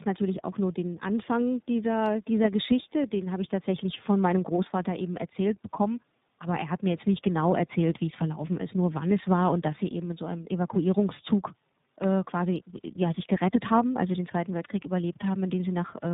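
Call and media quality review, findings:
Speech rough, muffled and warbly throughout, nothing above 3.8 kHz. Tandem speech coding: artefacts fit an AMR-NB leg then iLBC, bridged by G.711. Each low-rate coder re-encodes the previous one's decoded errors, stacking damage beyond either alone.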